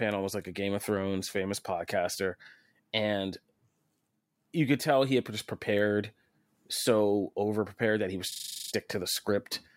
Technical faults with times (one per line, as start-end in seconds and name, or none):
8.32-8.72 system hang loop